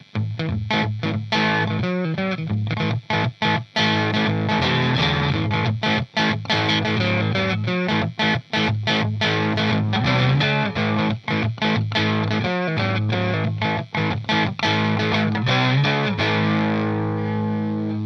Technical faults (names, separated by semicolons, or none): damaged data in a compressed stream